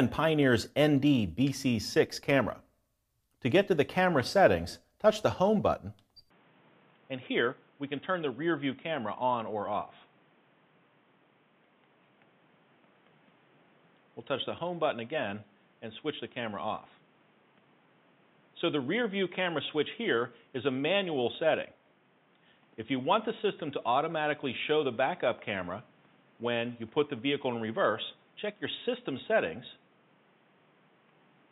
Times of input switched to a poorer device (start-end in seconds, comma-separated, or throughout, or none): 6.30-31.52